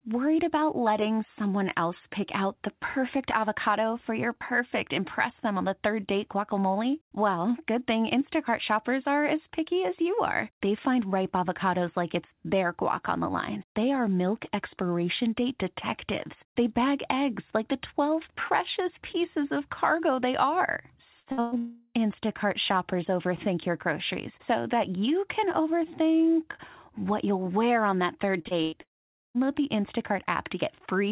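Just after "of cargo they are", three bursts of packet loss at 21.2–21.29 s, 21.32–21.41 s and 21.41–21.55 s left the receiver extending the last sound for about 60, 56 and 112 ms. Each gap becomes a fading held buzz or hiss, and the speech resumes with that stretch missing. From 21.58 to 21.97 s comes a long network dropout, likely a lost stretch of about 360 ms. The concealment keeps smearing the last sound throughout, so the whole gap is a sustained, decaying tone rather than silence.

At 28.42–28.48 s and again at 28.48–28.54 s, just after "wear on that third", short concealed packet loss filled about 30 ms holes each time with continued sound. These come across as quick wobbles or smears. Another burst of packet loss at 28.63–28.75 s is patched with about 94 ms of fading sound. A second long network dropout then runs from 28.81 to 29.38 s, again with the likely cause being roughly 540 ms of missing audio; the patched sound dies away into near silence before speech returns. 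Through the G.711 call path nothing above 4 kHz is present.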